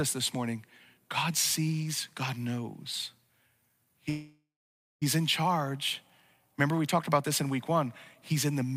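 Packets in this speech clip were likely held up in transit, draining the jitter buffer and causing a call audio freeze from 4.09 s to 5.04 s. The receiver stretches the last sound into a fading buzz or hiss that settles into about 0.56 s of silence before the stream resumes exactly where it stopped. Nothing is lost, but about 0.92 s of filler is inserted, so everything after it plays that much later.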